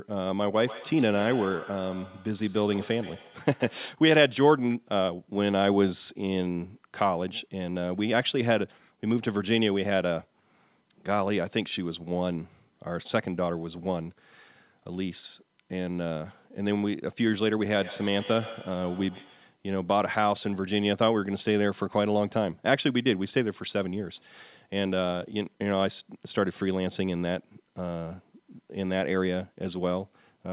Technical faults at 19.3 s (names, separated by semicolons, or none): feedback echo between two devices